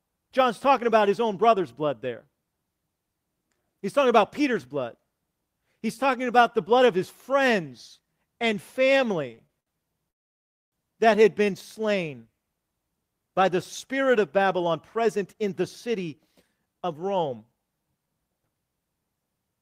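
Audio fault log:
9.31–9.68 s, repeated stalls (stutter): four brief gaps, longest 62 ms, filled by stretching the last sound, about 30% of the span, so the speech drags and stutters.
10.10–10.74 s, call audio freeze: playback halts 615 ms, mostly silent, then resumes where it stopped, adding a gap; likely delayed packets emptying the jitter buffer.
14.64–17.53 s, jitter buffer speed-up: after "by the spirit of", speech runs 8% fast at unchanged pitch as roughly 200 ms of pitch periods are trimmed to reduce buffered delay.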